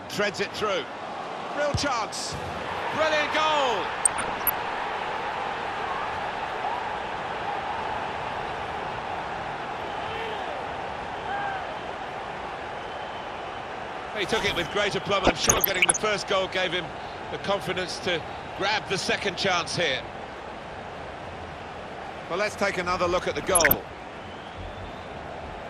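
Throughout, the audio carries the marks of MP2 compression, likely run at a low rate, with a dullness that fits roughly 80 kbps. MPEG Layer II divides the spectrum into 32 sub-bands and shares out a limited bit budget. At this rate the upper bands get switched off and the remaining ones are quantised coarsely, so the top end sounds muffled and a gurgling, grainy texture sits plainly audible on everything.

DAB burbling breaks in at 4.04 to 4.59 s, 15.22 to 15.97 s and 23.39 to 23.74 s. Reception errors, a fraction of a percent up to about one percent of bits, slip past error correction into the MP2 stream. Corrupted samples put short blips of noise into single sub-bands, and corrupted scale factors send individual sub-bands lurching in level for up to a frame. The middle burst is the longest and densest.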